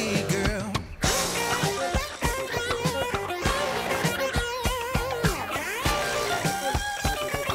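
At 4.74 s the audio changes character and stays that way to the end. This is low bit depth with noise shaping. The signal is carried with very few amplitude steps, which fits an 8-bit word length. The rounding error from those coarse steps is fed back and pushed upward in frequency. The result is a steady, thin hiss, roughly 20 dB below the signal, that grows much stronger toward the top of the band.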